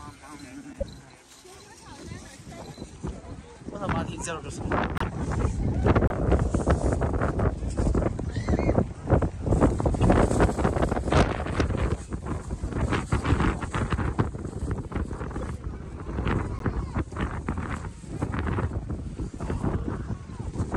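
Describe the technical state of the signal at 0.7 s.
A corrupt frame is decoded from 0.73 to 0.83 s. Bit errors inside a few compressed frames were played through anyway. Misread gains and codes put energy at wrong frequencies. The result is a brief chirp, squeak, blip or burst of noise, peaking near -15 dBFS.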